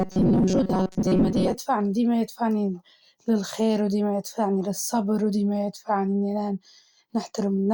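From about 0.01 s to 1.55 s, fresh audio was likely not arriving often enough, so the playback side kept looping its last short buffer while roughly half of the real signal was skipped. The result is robotic sound from repeated short buffers: the speech collapses into a rigid, metallic buzz locked at 188 Hz, which fits a buffer of about 5.3 ms repeating. The buzz still traces the rough shape of the speech.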